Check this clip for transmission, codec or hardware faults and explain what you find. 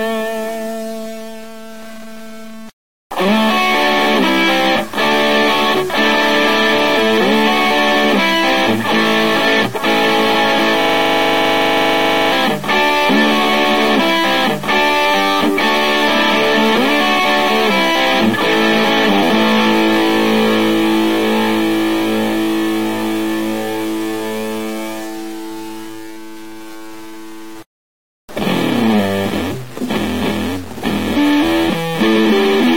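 Three faults are audible: grainy distortion throughout, a rapid mechanical repetition near 11 s, and a replayed stretch near 13 s.

Low bit depth without dither runs through the whole clip. Quiet passages sound gritty, with distortion that follows the signal and sits roughly 20 dB below it. The likely cause is truncation to very few bits, about 6, with no dither to decorrelate the rounding error.

A system hang loop runs from 10.81 to 12.32 s. One 40 ms scrap of audio repeats exactly, about 38 times, at 25 Hz, producing a mechanical stutter. The machine stalled while the audio hardware kept replaying the same short ring buffer.

A stream segment repeated from 13.09 to 15.08 s. About 2.0 s of audio plays a second time, with a small blip at the jump back. The player fetched or queued the same segment twice, so material already heard returns and adds roughly two seconds to the clip.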